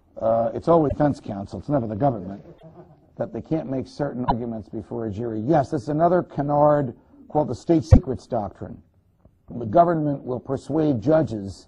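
The audio skips forward with a brief garbled chirp, noise burst or gap at 0.88–0.93, 2.58–2.63, 4.27–4.32 and 7.90–7.97 s, likely a broken MP3 bit reservoir: after dropped frames, the following 26.1 ms frames decode from another frame's data.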